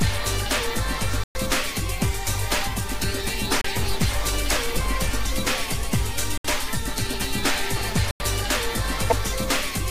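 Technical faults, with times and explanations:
1.24 to 8.22 s, Bluetooth stall: the sound cuts to silence at 1.24 s for 115 ms, 3.61 s for 32 ms, 6.38 s for 70 ms and 8.11 s for 91 ms, then resumes abruptly. Likely, interference delayed wireless packets, emptying the headphones' buffer until resent data arrived.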